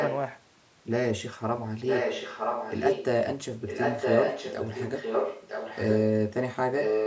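Speech with an echo leak: a delayed copy of the speech returns about 0.96 s behind the original at 0–0.14 s (somewhat quieter), 1.86–3.05 s, 3.67–6.01 s and 6.73 s to the end (about as loud as the speech). This is likely a far-end loudspeaker's echo canceller failing to suppress what its microphone picked up. The audio stops at 8 kHz.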